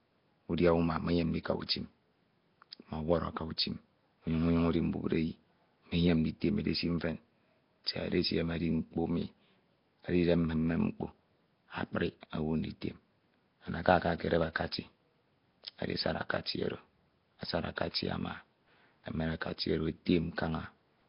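From start to finish the speech sounds gritty and hiss-fringed, blurred as if heard through water, with nothing above 5.3 kHz. Heavy Nellymoser compression is the likely cause: each short block gets too few bits, so quiet bands are dropped and replaced with noise.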